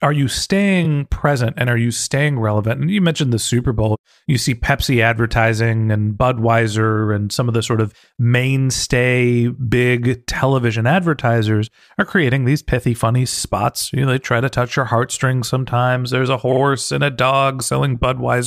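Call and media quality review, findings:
Repeated frames in the speech, heard as short stutters. 0.84–0.86 s, between "are you" and "present and are you": one 23 ms block plays twice. 13.31–13.40 s, after "creating these pithy funny", and 16.51–16.60 s, before "and a": a 46 ms block plays three times, adding about 93 ms each. Probable cause is the encoder or transport resending the same compressed frames, which the decoder plays back again.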